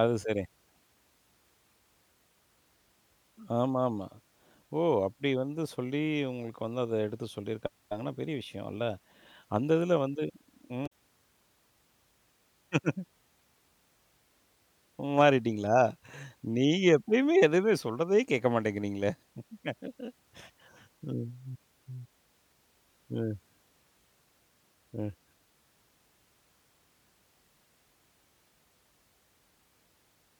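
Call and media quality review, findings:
Brief glitch in the speech, 10.83–10.92 s (about 90 ms). Damaged data in the compressed stream: decoder misreads corrupted frames, loses sync, resyncs at the next frame header.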